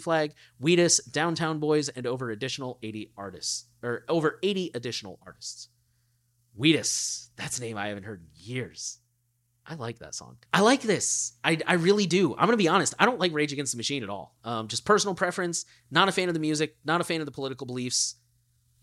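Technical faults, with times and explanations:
No technical faults detected anywhere in the speech recording.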